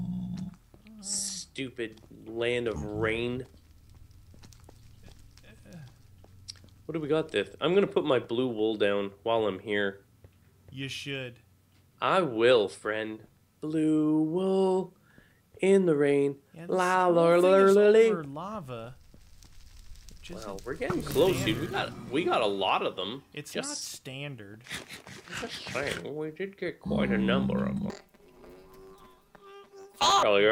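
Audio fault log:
27.90–30.24 s, planar audio read as interleaved: 10 ms left-then-right blocks replay at double speed, giving a robotic 100 Hz buzz; the spectrogram shows vertical striations every 10 ms.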